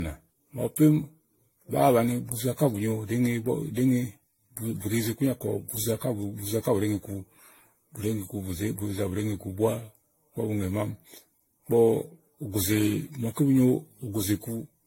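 Generation loss runs throughout: hollow, swirly, smeared speech with blurred attacks and nothing above 16.6 kHz, likely from around ten repeated AAC encodes near 64 kbit/s.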